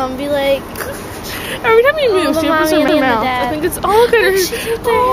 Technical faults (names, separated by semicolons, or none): CD skip